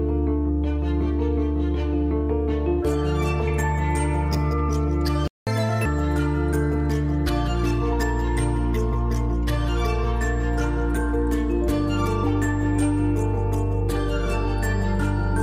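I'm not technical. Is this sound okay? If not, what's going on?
No. At 5.28 s the audio cuts out completely for about 0.19 s, then resumes where it left off. This is a playback stall, likely because the player briefly ran out of data. Unlike a dropout that skips material, nothing is lost here.

Right after, from 5.47 to 5.85 s, the sound plays 1.5 times too fast and rises in pitch by roughly seven semitones, a chipmunk-like jump. This catch-up at higher speed is the player rushing through its backlog before settling back to normal, unlike a steady speed error that would last throughout.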